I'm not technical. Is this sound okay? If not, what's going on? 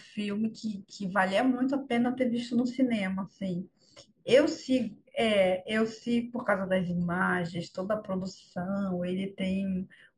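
No, not quite. The speech has imaging from linear upsampling throughout. It was likely recorded at a low rate and stretched to a higher one with a crude method, so the top end sounds dulled and faint mirror copies add a light metallic shimmer on s sounds.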